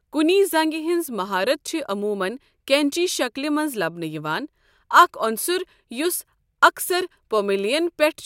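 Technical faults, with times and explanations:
No technical faults are audible in this speech.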